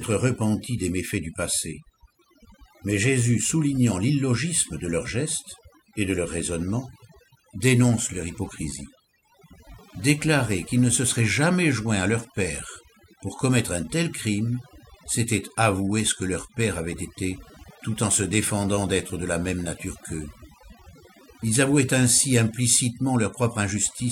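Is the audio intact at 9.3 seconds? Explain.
No, not really. At 9.3 s you're hearing the same overdone noise removal that runs through the whole clip. The noise reducer was pushed too hard, so any frequency band sitting close to what it judged to be noise gets dragged way down or shut off, and the softer bits of the speech get caught too. That's why the gaps sound almost dead apart from little twinkly specks.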